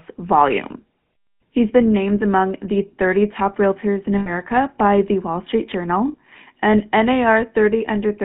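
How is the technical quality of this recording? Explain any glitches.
The quality is fairly rough: the whole clip has passed through a GSM phone codec, and there are two short dropouts.

The GSM full-rate codec damage runs throughout and is plainly audible. The speech sits in a narrow band, roughly 150 Hz to 3.5 kHz, and the coding rate fits GSM's 13 kbps. That codec models the vocal tract and drives it with a sparse pulse train, throwing away most of the excitation detail. You hear it as a buzzy, gravelly grain on the speech.

The lost GSM frames come at 4.18 to 4.30 s and again at 6.08 to 6.15 s. The first gap is about 80 ms, which fits four lost frames. The second is about 60 ms, or three frames. In each case the decoder had no good data, so it reused the last good frame's settings. Both gaps are far too short to fade out completely, so each one comes across as a brief metallic, ringing smear instead of silence.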